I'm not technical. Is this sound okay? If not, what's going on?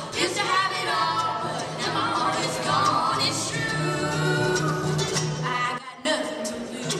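No. At 5.78 s the level suddenly drops to much quieter, with the background noise dropping just as far, then jumps back at 6.05 s. That is a sudden gain jump, likely a volume setting switched instantly. A fade would slide down gradually.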